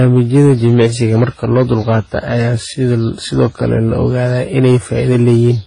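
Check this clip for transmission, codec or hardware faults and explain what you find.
Two faults run through the whole speech clip.

Hard clipping is present from start to finish. The signal is driven about 6 dB past what the chain can pass. Roughly two percent of samples hit the limit and are cut flat. The flat tops add high harmonics, heard as crackle on louder syllables.

Transcoding between lossy codecs also runs throughout. Nothing remains above 10.1 kHz. The artefacts of the two codecs are heard together. This likely comes from a low-rate HE-AAC stream re-encoded to WMA. The bitrates sound like about 16 kbit/s, then 32 kbit/s. The second codec spent its bits on the first one's damage.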